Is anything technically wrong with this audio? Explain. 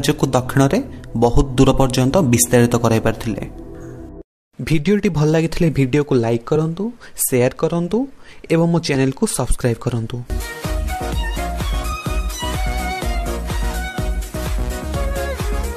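Yes. Brief glitches at 1.70–1.72 s, 6.55 s, 8.94 s and 11.91 s come from damaged data in a compressed stream, which makes the decoder lose sync.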